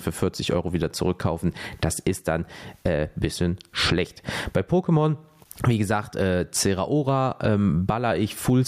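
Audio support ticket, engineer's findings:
Gain pumping throughout the speech. Roughly 20 dB of gain swing. Likely cause: input gain far too high, fast limiter/compressor clamping peaks. Waveform squashed, loud and soft parts close in level.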